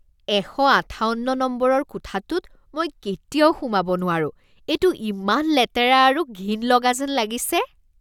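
A short recording of speech, with no technical fault to report. Nothing in it calls for a time stamp or a cause.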